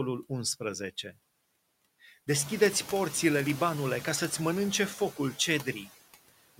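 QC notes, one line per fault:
Throughout, noise suppressor artifacts: the suppressor cuts steady room noise by about 19 dB between words and lets it back under speech, so the background pumps, including after its rise near 2.5 s.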